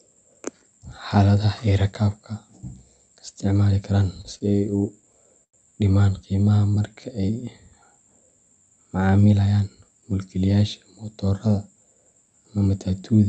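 From 4.21 to 5.55 s, just after "isticmaali karaan", come repeated stalls (stutter). Packets arrived late, and the jitter buffer ran dry seven times. Each time the receiver stretched the last sound to fill the wait. The longest fill lasts 99 ms, and together they total 191 ms. Nothing is lost, but the speech catches and drags.

From 6.36 to 7.37 s there is a jitter buffer slow-down. The buffer was short of reserve, so it repeated single pitch periods to gain 115 ms. Speech runs at about 90% speed. The pitch stays the same, and sounds are drawn out.

From 9.32 to 10.14 s there is the opposite: a jitter buffer speed-up. Too much audio had built up in the buffer, so the receiver trimmed short pitch-period pieces, around 150 ms in all. Speech runs at about 115% speed at unchanged pitch and sounds hurried.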